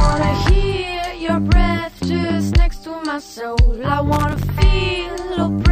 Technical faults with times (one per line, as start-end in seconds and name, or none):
4.13-4.47 loose connector crackle